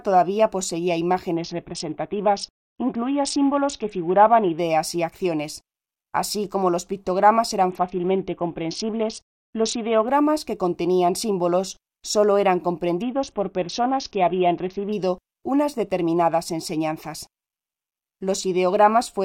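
From 1.36 to 4.58 s, 7.70 to 10.08 s and 13.02 to 14.93 s, the treble dulls and a gritty noise rises. This is a Bluetooth SBC bit pool drop, consistent with a fall from bit pool 28 to 6 (near 60 kbps) that starves the upper sub-bands. Unlike a dropout, the sound never stops, and clarity returns between the spans.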